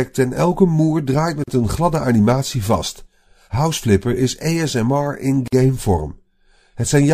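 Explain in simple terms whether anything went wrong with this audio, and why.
The speech briefly drops out twice, with short holes at 1.44 to 1.48 seconds and 5.48 to 5.53 seconds, four seconds apart. These are gaps at a join of encoded pieces: separately compressed chunks were stitched together with each chunk's built-in silent padding left in.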